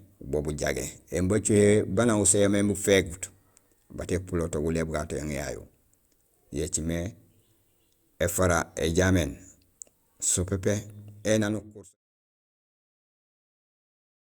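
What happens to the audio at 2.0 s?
At 2.0 s the speech runs on intact, with no dropout, click or distortion to be heard.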